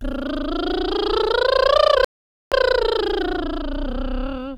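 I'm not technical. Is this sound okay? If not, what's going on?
No. At 2.05 s the music stops dead for about half a second, a rebuffering stall: playback ran out of data, waited, then resumed exactly where it paused.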